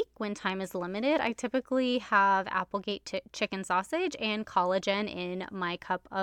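Nothing in this speech recording stands out as a technical fault, so there's no problem to point to anywhere along the way.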